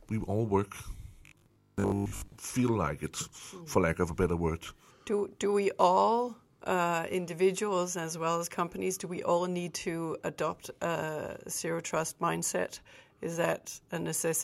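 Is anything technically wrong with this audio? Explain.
Yes. Robotic sound from repeated short buffers, 1.26 to 2.34 s, just before "feel like it for": a rigid 50 Hz metallic buzz, likely from 20 ms chunks replaying over most of the real audio.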